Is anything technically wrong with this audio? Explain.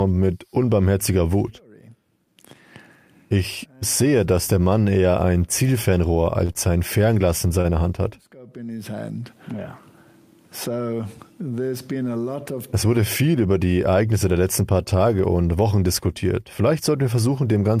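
Yes, there are three short stalls from a late packet, at 6.45 to 6.51 s, 6.53 to 6.57 s and 7.61 to 7.66 s. Each time a packet arrived late, the jitter buffer ran dry, and the last sound got stretched for about 34, 23 and 34 ms before playback resumed. You hear a brief hold with a slight buzzy dip.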